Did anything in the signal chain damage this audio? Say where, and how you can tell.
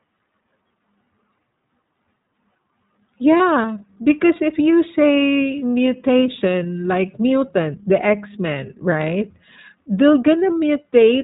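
Yes. At the codec stage, the whole clip is cut off above 4 kHz and has a slightly rough, synthetic texture. That fits iLBC at 15.2 kbps with 20 ms frames, and the roughness is what separates it from simple band-limiting.

At the network stage, lost iLBC frames from 3.38 to 3.41 s leave a brief held, buzzy vowel where the last pitch cycle was repeated. This fits one lost 20 ms frame. The speech is clean again immediately, unlike codecs whose errors carry over into following frames.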